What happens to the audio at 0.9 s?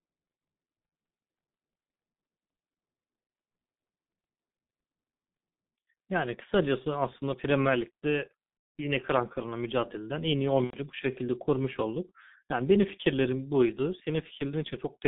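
Between 0.86 and 0.92 s, VoIP packet loss concealed by the speech codec cuts into the signal. About 60 ms of data is missing, which fits two 30 ms frames. The decoder fills the gap by repeating its last pitch and spectral shape at falling gain, so the sound smears into a fading buzzy tone or coloured noise. It stays weak for a short while after the stream resumes.

Around this, the whole clip runs through the G.723.1 codec at 6.3 kbit/s, passing roughly 150 Hz to 3.7 kHz. Its coarse frame-by-frame voice model causes heavy damage: the speech is muffled and hoarse, with smeared consonants, and the dropout is heard against that degraded background.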